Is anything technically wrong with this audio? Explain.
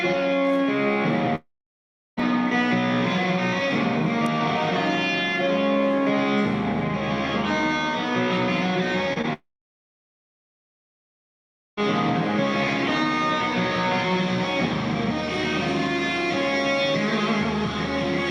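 Yes. There is a long network dropout from 1.35 to 2.19 s and again from 9.33 to 11.82 s. Audio stops arriving, likely from a network interruption. A brief fading continuation is followed by silence of about 0.7 s and 2.3 s, and the sound resumes with that stretch lost.

Short concealed packet loss occurs at 9.13–9.18 s and 9.22–9.25 s, just before the second dropout. About 20 ms was missing each time and was synthesized from the preceding sound, giving a quick smear or wobble rather than an audible gap or silence.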